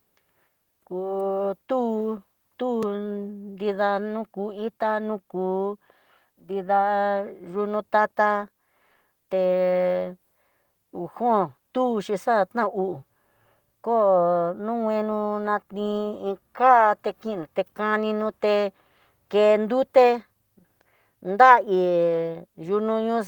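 At 2.83 s a single sharp tick cuts into the speech: a block of digital silence about 1.3 ms long, which fits a 64-sample buffer that the program failed to fill in time. The signal drops straight to silence and jumps back with no fade, under light Opus voice compression.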